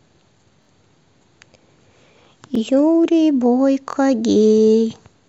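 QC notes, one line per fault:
0.63–0.67 s, repeated buffer: one piece of about 23 ms plays three times back to back, with hard joins heard as a brief buzzy stutter. The length fits a 1024-sample buffer replayed when new audio arrived late.
2.55–2.58 s, repeated buffer: the same piece of about 23 ms sounds twice, giving a single click-like hitch at the join. Nothing appears lost; playback resumes where it left off.
3.90–3.95 s, repeated buffer: a piece of about 23 ms is repeated twice more, giving a short stutter with hard edges as the device waits for the next buffer.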